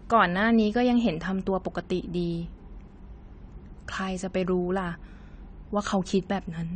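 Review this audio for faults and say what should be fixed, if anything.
Throughout the speech, AAC compression damage is plainly audible: the top end stops at about 9 kHz, and the dull, swirly texture on sustained sounds and sibilants points to a low bitrate around 32 kbps, likely from AAC-LC encoding. Prevent it by encoding at a higher bitrate or keeping a lossless master.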